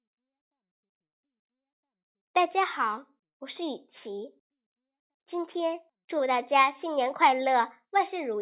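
No technical fault can be heard anywhere in the recording; the speech signal stays continuous and steady throughout.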